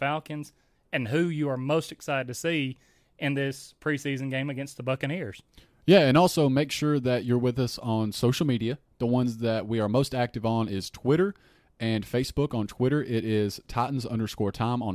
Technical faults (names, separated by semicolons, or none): none